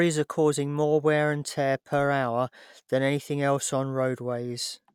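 No technical faults are audible anywhere in the clip.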